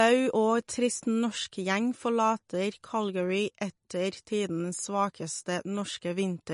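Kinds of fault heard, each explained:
MP3 compression: the speech sounds watery and swirly throughout, with smeared onsets and nothing above 10.5 kHz, likely an MP3 encoder short of bits, fitting about 40 kbps. A spectrogram shows a flat ceiling at 10.5 kHz and flickering holes where weak bands vanish.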